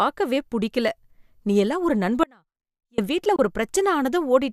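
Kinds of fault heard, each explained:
Audio dropout to a faint residue: The speech cuts out abruptly just after "நீயெல்லாம் ஒரு" at 2.24 s and returns at 2.98 s, leaving a hole of about 0.75 s. The gap is not silent: a faint sound about 35 dB below the normal level remains. That points to the wanted signal being lost upstream while the downstream path stayed live. The likely cause is a momentary break in the source connection.
Digital broadcast dropout: From 3.36 to 3.39 s the speech is muted for 24 ms, entered through a very quick fade of about 3 ms rather than a hard click. A brief mute like this fits a receiver discarding a single corrupted or missing frame and holding silence until valid data resumes. Whatever speech fell in that interval is gone.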